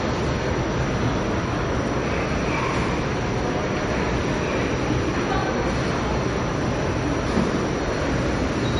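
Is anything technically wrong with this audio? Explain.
Yes. Throughout the clip the treble stops dead at about 10.6 kHz, and the remaining sound has a watery, swirling texture, with faint components flickering in and out and transients smeared. This is likely MP3 compression at a low bitrate, around 40 kbps. The encoder, starved of bits, discards everything above a fixed cutoff and zeroes quieter frequency lines frame by frame. That flickering swirl distinguishes it from a simple low-pass filter, which removes treble but leaves the rest of the sound clean.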